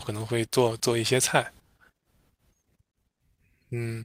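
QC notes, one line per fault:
Nothing to flag here, the speech runs along without a single problem worth a note.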